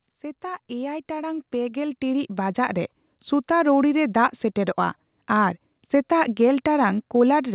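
From 0.41 to 3.78 s you get automatic gain rising: the gain control decided the input was too quiet and kept pushing its gain up, about 12 dB in all, so the voice and the background swell together over those few seconds, all within a narrowband call sound topping out at 4 kHz.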